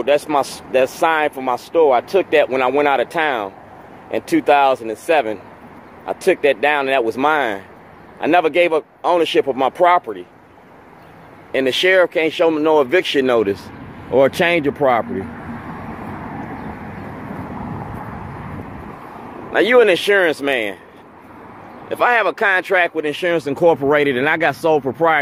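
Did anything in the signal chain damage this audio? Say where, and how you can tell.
No, nothing in this audio stood out on listening as damage from any stage of the signal chain.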